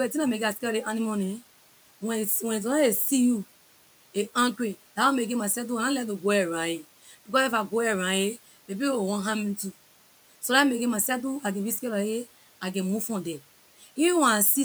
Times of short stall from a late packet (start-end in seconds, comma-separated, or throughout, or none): none